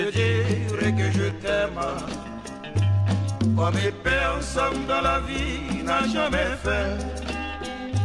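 Nothing is technically wrong with this audio, so there are no times or causes to give.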